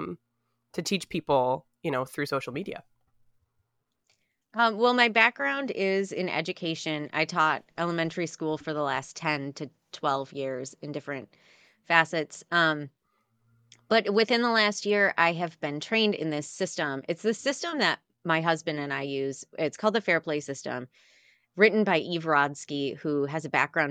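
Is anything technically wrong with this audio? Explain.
No, nothing technically wrong stood out on listening to this speech recording.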